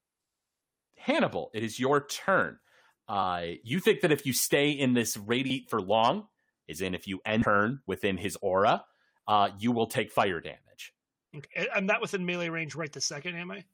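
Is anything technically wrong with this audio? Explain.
Yes. Damaged data in a compressed stream causes four short blips in this speech: 3.22–3.24 s, before "you think that if"; 5.49 s; 7.42–7.44 s, between "is in if you" and "within his aura uh"; and 11.44–11.46 s, after "will take fire damage". Corrupt bytes make the decoder misread frames and lose sync. Each glitch is a brief chirp, squawk, click or short hole.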